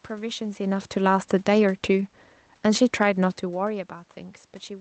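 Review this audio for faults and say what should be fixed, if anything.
From 0.59 s to 3.84 s the speech sinks steadily, and the room noise sinks right along with it, about 4 dB quieter by the end. This is automatic gain falling: the gain control judged the input too loud, or its background noise too strong, and gradually lowered its gain. Setting the input level lower at the source, or slowing the AGC's response, would prevent this.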